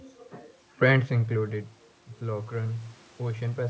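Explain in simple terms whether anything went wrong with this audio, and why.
Automatic gain rising starts at about 0.83 s. The voice got much quieter as the talker moved back around 1.0 s, and the call's level control slowly turned the volume up until the end. The room noise swells along with the voice, which shows it's the gain and not just the talker moving.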